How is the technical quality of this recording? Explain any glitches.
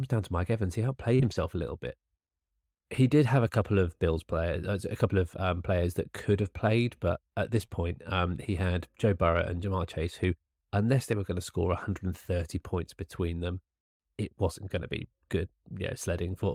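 The recording has network packet-loss damage in two spots, near 1.2 s and 7.6 s. Two kinds of repair can be heard.

Short concealed packet loss occurs at 1.15 to 1.21 s and at 7.65 to 7.70 s, just before "um he had". About 40 ms and then about 20 ms of audio never arrived. The receiver extended the preceding sound to cover each hole, then blended back into the real signal. Each spot comes across as a brief smear or wobble. A short sound may be lost inside it.

Lost packets rebuilt from error correction follow at 1.19 to 1.33 s, at 7.53 to 7.63 s after "have played but at", and at 7.70 to 7.72 s before "um he had". They cover 80 ms, 60 ms and 20 ms, which fits runs of 20 ms packets. Each missing packet was recreated from a low-bitrate copy carried in the next one. Nothing drops out. The rebuilt stretches just sound rougher and noisier than their surroundings.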